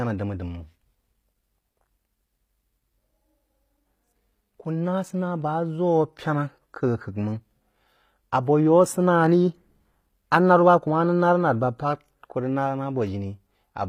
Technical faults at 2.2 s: HE-AAC compression

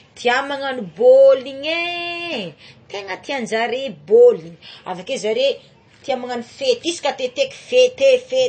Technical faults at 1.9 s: MP3 compression

